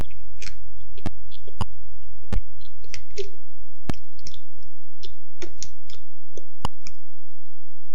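From the start to 2.81 s, channel delay (comb filtering) colours the sound. One channel arrives roughly 10 ms behind the other, and when the two are folded to mono their shared content cancels at evenly spaced frequencies, with the first notch somewhere near 50 Hz and further ones roughly every 100 Hz above it. The result is hollow and phasey. The notches stay fixed rather than sweeping, which separates this from flanging, and no decaying tail follows, which rules out room reverberation.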